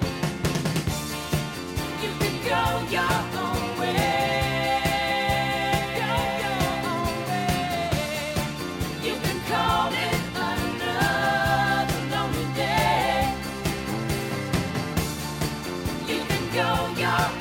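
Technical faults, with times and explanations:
Nothing stood out on listening to this audio.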